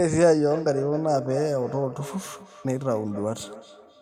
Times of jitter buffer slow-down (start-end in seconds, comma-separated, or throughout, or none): none